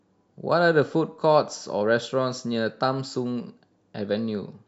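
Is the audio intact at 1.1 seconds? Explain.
Yes, the speech at 1.1 seconds is intact, with no fault present at that moment.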